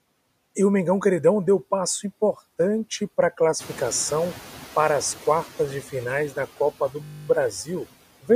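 Noise suppressor artifacts run through the whole recording. The suppressor pulls steady background noise down by about 14 dB frame by frame, so the residual noise dips in the gaps and swells under the speech.

At about 3.5 s the room noise jumps by about 13 dB. From 3.59 s to 5.47 s, between "passo importante para a" and "de finais da", the noise suppressor is catching up: its noise estimate lags the new level, so the louder noise comes through with only about 7 dB of reduction and then sinks over roughly 1.9 s as the estimate adapts.

From 7.04 s to 7.28 s a system hang loop occurs: the machine stalled while the audio hardware kept replaying the same 20 ms buffer, twelve times over. At a 50 Hz loop rate this is heard as a short, steady buzz, with essentially no audio missing afterwards.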